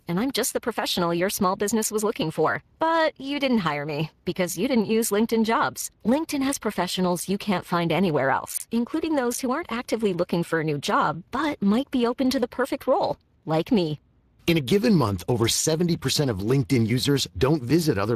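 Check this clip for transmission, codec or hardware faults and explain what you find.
One codec fault runs throughout: Speex codec compression. Its CELP coder has too few bits for the excitation, so the speech sounds noisy and hoarse with plainly audible damage, which fits a rate around 22 kbps. Nothing is present above 15.3 kHz.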